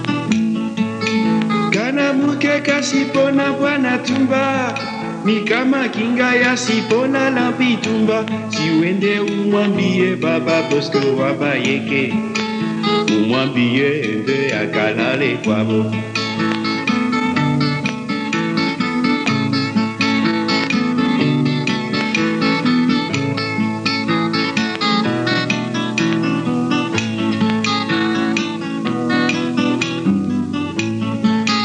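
No technical faults are audible.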